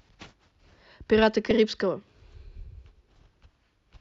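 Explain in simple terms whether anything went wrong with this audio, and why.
A brief squeak or blip cuts through the speech at about 1.51 s. This is a corrupt frame decoded: some of the stored data was damaged, and the player decoded it anyway, putting sound at the wrong pitches for an instant, likely across a couple of frames.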